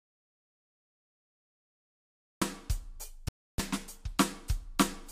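A music clip where the input was likely lost, so silence was written: an audio dropout to silence already under way at 0.0 s, with dead silence and no room tone until the music enters mid-flow at 2.42 s. Packets then likely failed to reach the headphones, a Bluetooth dropout that cuts a hole of about 0.3 s from 3.28 to 3.6 s, consistent with around 14 lost frames, before the music resumes further along, as if it had kept playing.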